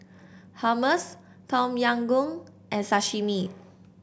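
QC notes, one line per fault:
No faults found in the speech. Nothing to log at any point in the clip.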